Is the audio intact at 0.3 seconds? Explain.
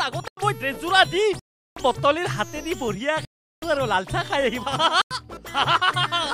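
No, there's a hole from 0.28 to 0.37 s, a block of digital silence about 93 ms long where the output buffer likely went unfilled, consistent with a 4096-sample block.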